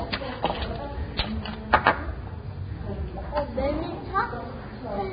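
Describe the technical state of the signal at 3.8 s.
At 3.8 s the sound is hissy and grainy, with roughened tones, smeared attacks and nothing above 4.9 kHz. This runs through the whole clip and is likely heavy Vorbis compression, consistent with roughly 16 kbps, where coarsely quantised treble turns fine detail into noise.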